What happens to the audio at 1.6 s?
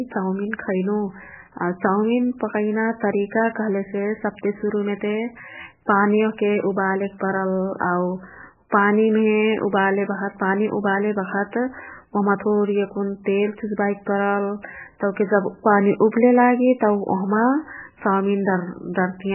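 At 1.6 s the speech carries the same damage heard across the whole clip, likely MP3 compression at a very low bitrate, which fits about 8 kbps. Starved of bits, the encoder removes everything above 3 kHz and drops weak frequency lines. The result sounds dull, watery and swirly.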